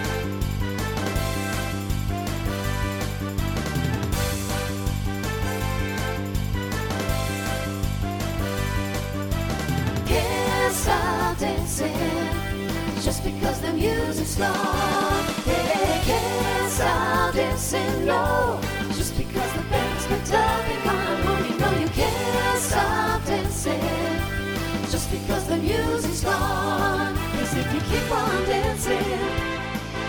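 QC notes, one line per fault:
0.12–29.05 s: clock drift buffer slips. A short click recurs every 2.22 s while there is signal, about fifteen in all. The cause is likely a clock mismatch of around 70 ppm between two devices. A buffer between them slowly fills or drains, then a handful of samples, around seven, is dropped or repeated. Each slip breaks the waveform's continuity, so it is heard as a tick at a steady interval.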